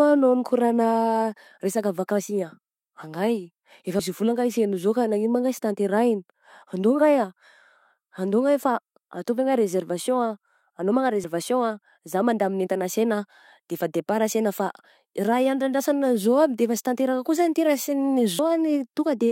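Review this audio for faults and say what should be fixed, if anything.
Three spots in this speech jump abruptly at 3.99, 11.24 and 18.39 s, each with the sound skipping ahead by roughly a tenth of a second, with no gap. That points to a likely dropped buffer (overrun), where the recording software didn't pull in a chunk of samples before the hardware wrote over it, so the audio on either side got stitched straight together. To prevent it, use a larger input buffer and keep the capture thread from being starved.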